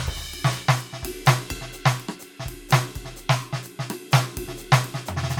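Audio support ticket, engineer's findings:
Music playback shows no technical faults across the clip; the signal is continuous and stable, with no level, timing or channel problems found.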